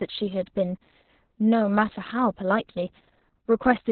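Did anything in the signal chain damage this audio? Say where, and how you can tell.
Yes, at the codec stage, throughout the clip. Opus voice compression in SILK mode has narrowed the band to narrowband, with nothing above 4.3 kHz. Coarsely coded excitation leaves the speech muffled, hoarse and slightly robotic, which fits a bitrate near 6 kbps.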